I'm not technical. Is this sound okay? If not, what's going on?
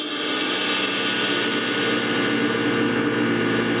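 No, there is gain pumping throughout: loud and soft parts end up closer in level and the sound is squashed, likely from a limiter fighting gain set far too high. Unlike a gate, a limiter turns sound down rather than cutting it out.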